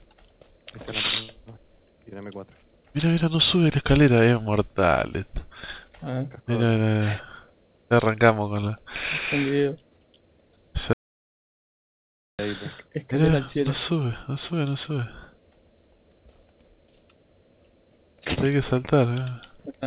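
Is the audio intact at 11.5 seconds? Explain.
No. An audio dropout to silence runs from 10.93 to 12.39 s, likely a lost input with silence written, leaving 1.46 s of dead silence without room tone.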